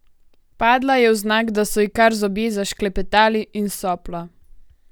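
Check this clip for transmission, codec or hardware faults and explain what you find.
No transmission, codec or hardware faults.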